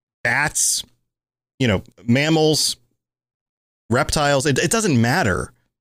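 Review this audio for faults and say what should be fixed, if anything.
Nothing needs fixing, as the review finds no faults in this audio.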